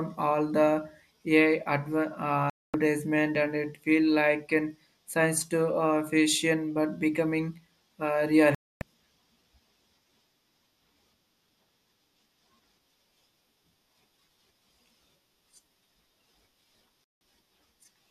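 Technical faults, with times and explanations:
2.50–2.74 s, 8.55–8.82 s and 17.04–17.21 s: digital broadcast dropout. The receiver loses good frames and mutes, so the speech drops to silence for about 0.25, 0.27 and 0.17 s (the second just after "fiction but becoming uh") and resumes later. Nothing is smeared or repeated to cover the gap.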